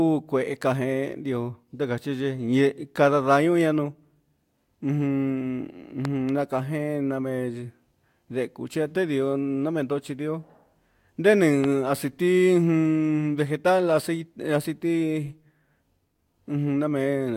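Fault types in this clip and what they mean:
Loud pop: Two sharp pops, then later a single louder one, jump above the speech, which carries on beneath. Likely cause: a voltage spike.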